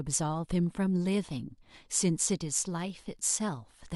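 A short speech recording with nothing technically wrong in the signal at any point.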